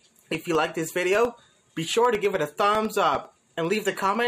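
Periodic USB or driver dropouts, 0.15 to 4.15 s: every 0.1 s the bus or driver stalls, silencing roughly half a millisecond and producing steady ticks.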